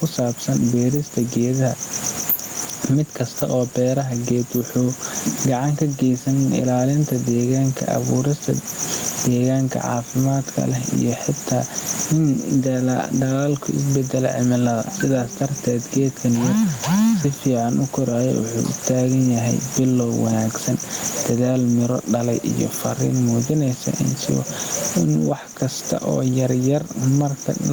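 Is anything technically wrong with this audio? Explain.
Yes, there's gain pumping all the way through this speech. The room noise sits about 29 dB under the voice, and the gain swings by about 15 dB. Most likely the mic gain is set far too high and a fast limiter keeps clamping down, which squashes loud and soft together.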